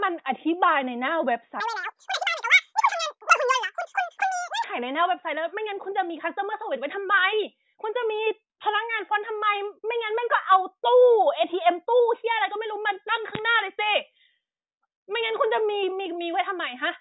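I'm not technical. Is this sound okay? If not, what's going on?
No. There's a wrong sample rate fault from 1.60 to 4.64 s. During that stretch the speech plays twice as fast and a full octave higher, so it sounds squeaky and rushed, like a chipmunk. The audio was stored as a series of tiny snapshots, and here they're being played back faster than they were captured, which fits sound recorded at 8 kHz but played at 16 kHz. Speeding them up raises the pitch and the pace together.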